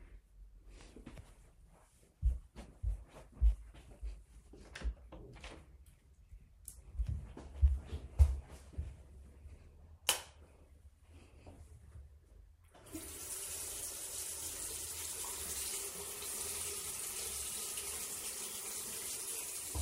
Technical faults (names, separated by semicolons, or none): none